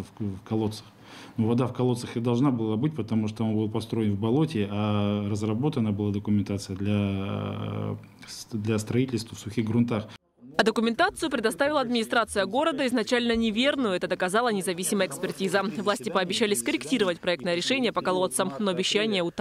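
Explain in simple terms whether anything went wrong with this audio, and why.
Nothing went wrong with this audio; there are no faults to report anywhere in it.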